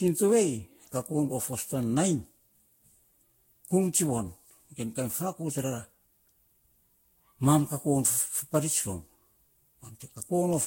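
Generation loss runs throughout the speech, from start to end. The sound is swirly, smeared and hollow beyond what a single encode at this quality would give, and consonant onsets blur instead of landing crisply. The cause is likely repeated lossy re-encoding, roughly seven passes of a Vorbis-style codec at a rate that points to around 62 to 66 kbit/s. Each pass requantises on a shifted frame grid, so noise and spectral gaps pile up. Nothing remains above about 16.6 kHz.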